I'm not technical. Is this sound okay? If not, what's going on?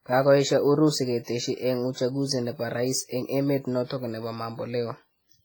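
No. The whole clip has a washy, ringing quality, with a hiss that rises and falls along with the speech. That points to heavy squeezing of the file to make it small, likely WMA compression. This kind of format stores sound in long chunks. When space is tight, it throws away quiet detail and leaves blurry noise spread through each chunk. That is why the speech sounds smeared rather than crisp.

There is also a pre-echo from about 1.23 to 1.28 s, just before "eng uchunguzi nepo rais". A brief hiss arrives slightly ahead of a sharp sound, lasting about 42 milliseconds. It happens because the compression spreads its noise across a whole chunk of time. The noise meant to hide under the loud moment leaks into the quiet gap before it. The sharp start then sounds soft and blurred.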